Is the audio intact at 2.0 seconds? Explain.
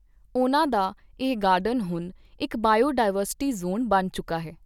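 Yes, at 2.0 seconds the speech plays through cleanly, with no dropout, click, distortion or other fault.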